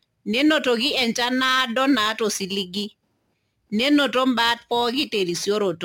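A gritty, inharmonic fizz clings to the speech throughout, rising with louder syllables and sibilant, high-frequency sounds. The cause is crude rate conversion: samples were simply dropped or repeated to the nearest one, with no filtering, and the repeating pattern fits a change from 48 kHz to 44.1 kHz. That timing error creates shifted, inharmonic copies of the speech, sitting roughly 25 dB below it.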